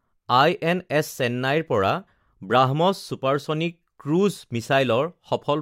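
Nothing here stands out as a technical fault; the speech runs along without any glitch, dropout or other problem worth flagging.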